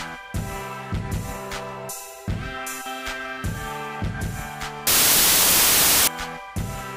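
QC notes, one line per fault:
4.87–6.08 s, samples built from the wrong bytes: for about 1.2 s the reader assembles each sample from misaligned or misordered bytes, so the rapidly varying low-order bits end up carrying the weight of the high-order ones. The result is a burst of loud, harsh broadband noise, close to white on loud sounds, then stopping abruptly once correct byte alignment returns at 6.08 s.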